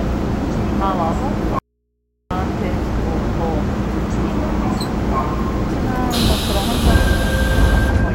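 At 1.59 s the sound cuts out abruptly. This is an audio dropout to a faint residue, lasting about 0.72 s until 2.31 s. Only a low mains hum, roughly 50 dB down, fills the gap. The likely cause is a lost signal feeding an open, live input.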